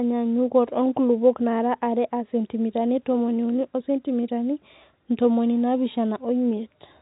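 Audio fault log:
No faults logged; the speech carries G.711 A-law telephone coding with its band topping out around 3.8 kHz, and any coding damage is faint at most.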